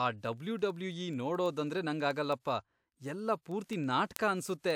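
A receiving device running on its own clock, not locked to the sender's, drifts by around 200 ppm. From 0.16 s to 4.71 s this produces word clock ticks: around forty sharp ticks of uneven strength, roughly ten per second, each where one sample is dropped or repeated.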